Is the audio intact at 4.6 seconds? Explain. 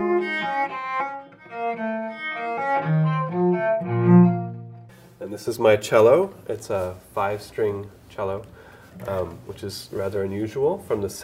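No. At 4.6 seconds the sound falls inside a span of channel delay (comb filtering) that runs from 0.0 to 5.48 s. One channel lags the other by around 5 ms, and when the two are folded to mono, the shared content cancels at evenly spaced frequencies, starting near 100 Hz. Those fixed notches hollow out the spectrum, giving the audio a phasey, hollow colour.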